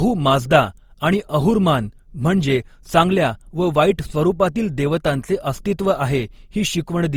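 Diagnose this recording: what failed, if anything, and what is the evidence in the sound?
Generation loss runs through the whole speech clip, at the codec stage. The sound is swirly and smeared with a hollow coloration, consonant attacks are blurred, and nothing is present above 20.2 kHz. That degradation is heavier than a single pass at a rate fitting Opus at 48 kbit/s would give. Most likely the audio was decoded and re-encoded about seven times. Each pass quantises again on a shifted frame grid, so noise and spectral holes accumulate.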